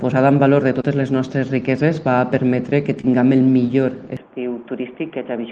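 Audio carried over a call link shows short concealed packet loss at 0.81 to 0.85 s and again at 3.01 to 3.05 s. Each time, about 20 ms failed to arrive and the receiver extended the preceding sound before blending back, leaving a brief smear rather than a hard click or silent dropout. From 4.17 s to the end, the sound turns abruptly dull. Nothing above 3.5 kHz remains, against roughly 12 kHz of bandwidth earlier, which points to the call codec's wider setting. The level also falls by about 5 dB with no gap at the change. This is most likely an input switched to a poorer device. Unlike a codec lowering its bandwidth, the tone and level shift together and stay changed.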